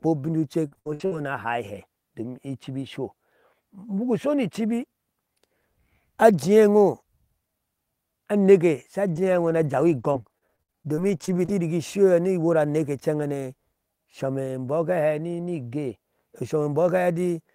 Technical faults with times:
0.39-1.20 repeated packet loss (robotic sound)
9.14-11.50 repeated packet loss (robotic sound)

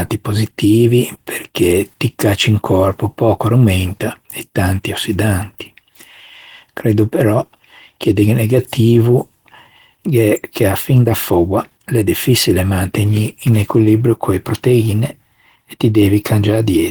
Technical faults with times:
0.00-16.90 Opus compression

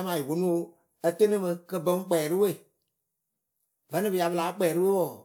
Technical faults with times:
none

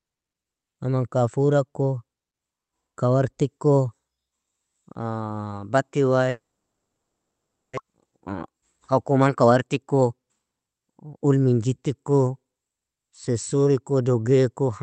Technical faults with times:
6.29-7.79 long network dropout
7.87-11.11 jitter buffer speed-up

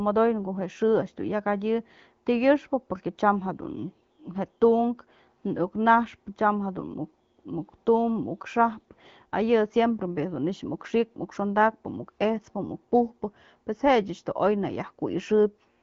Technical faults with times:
none

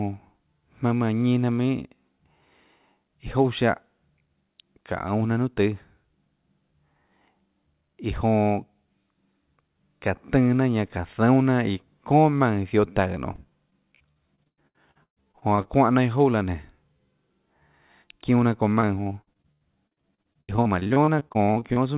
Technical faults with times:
13.32-15.67 repeated packet loss (robotic sound)
18.75-21.78 repeated packet loss (robotic sound)

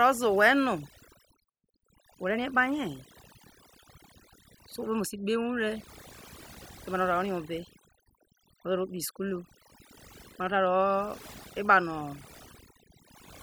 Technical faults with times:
0.00-13.43 overdone noise removal

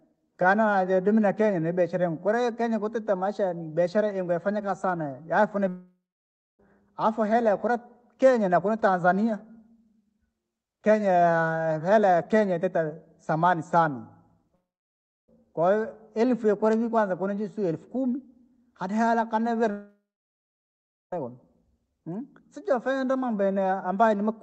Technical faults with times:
5.68-6.60 long network dropout
14.55-15.29 long network dropout
19.71-21.13 long network dropout

